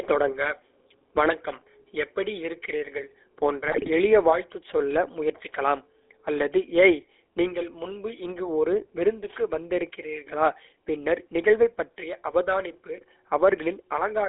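Throughout the clip the speech has passed through the GSM full-rate codec. Its encoder reduces the voice to a vocal-tract filter driven by a coarse train of regular pulses, which fits the old 13 kbps full-rate scheme. The result is a band squeezed to about 300 Hz to 3.6 kHz, with no air above it, and a constant buzzy, gravelly roughness that plainly colours every syllable.

From 3.68 to 3.89 s, right after "வணக்கம் எப்படி இருக்கிறீர்கள் போன்ற" and before "எளிய வாழ்த்துச் சொல்ல முயற்சிக்கலாம்", GSM bit errors hit the stream. At a bit error rate of about 3.4 percent, corrupted filter, pitch and gain parameters reached the decoder. It then rebuilt the speech from wrong values, so the spectrum warps and the level jumps. For roughly a fifth of a second the voice breaks into squawks and gargling, which suggests around ten damaged frames.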